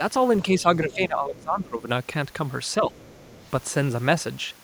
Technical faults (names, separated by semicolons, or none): speech suppressed in double talk; other side's voice leaking through